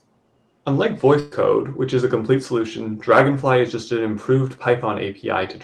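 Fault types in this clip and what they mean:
Burst of packet loss: Around 1.19 to 1.33 s, a run of audio never reached the player in time, roughly 120 ms in all. The receiver kept the last sound going and let it fade rather than leaving silence. That concealment fills the whole gap, so it sounds like a brief held buzz or fading hiss. The sound then picks up further along, with the missing stretch skipped. The surrounding call audio carries the codec's usual coding noise and a top end that fits a 12 kHz limit.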